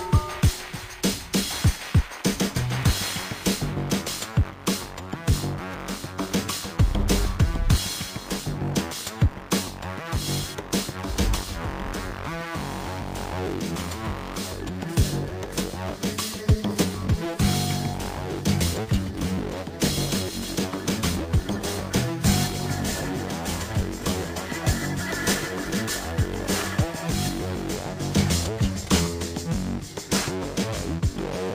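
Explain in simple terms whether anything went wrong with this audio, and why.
From 27.76 s to the end at 31.55 s, a gritty, fizzy buzz rides on top of the sound, strongest on loud and high parts. This is crude rate conversion: the audio was stretched to a new sample rate by guessing in-between values without smoothing, which fits a change from 32 kHz to 44.1 kHz.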